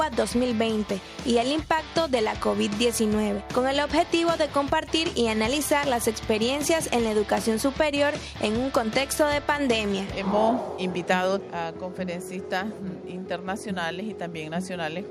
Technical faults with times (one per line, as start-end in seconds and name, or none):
none